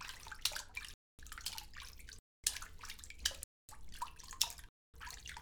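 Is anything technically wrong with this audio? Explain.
Yes: a gap between chunks recurs at 0.94, 2.19, 3.44 and 4.69 s. Between 1-second blocks, 250 ms of silence is inserted at each join, cutting short holes into the sound without losing any of it.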